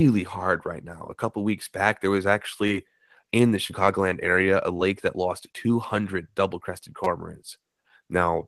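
Speech over a call link. Short concealed packet loss smears the audio at 2.67 s after "weeks back there was", at 3.67 s between "in the" and "area a", and at 4.77 s before "that lost". Each time about 20 ms failed to arrive and was filled by continuing the previous sound. A repeated buffer causes a brief buzzy stutter at 7.04–7.06 s. The same 5.3 ms slice plays four extra times, which fits a 256-sample buffer.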